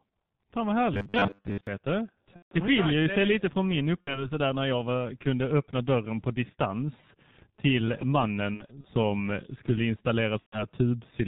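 The G.723.1 codec runs through the whole speech clip at heavy damage. Its coding at 6.3 kbit/s discards everything above 4 kHz and refreshes its model of the vocal tract only every 30 ms, so the voice sounds muffled and hoarse, and consonants smear into the vowels around them.

From 0.94 to 1.67 s there is robotic sound from repeated short buffers, likely caused by audio arriving too late for playback. Most of the real signal in that stretch is replaced by loops of the last fragment received. The loops impose a rigid 100 Hz buzz, which fits a repeated buffer of about 10 ms. The result is a metallic drone that only loosely tracks the speech.

VoIP packet loss concealed by the speech codec then occurs four times. In each case the decoder rebuilds the missing stretch from its last pitch and filter state and lets the level sag. From 2.36 to 2.53 s, about 150 ms is lost just before "det skiljer tack". 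From 4.01 to 4.26 s, a 60 ms gap falls between "det lite från min" and "där när jag var". From 8.54 to 8.87 s, after "dörren på distans till", 120 ms of losses are spread over about 300 ms, with no gap longer than 60 ms. From 10.40 to 10.64 s, 120 ms is lost. Each gap turns into a fading buzzy tone or coloured noise, and the speech stays weak and distorted for a short while after real audio resumes.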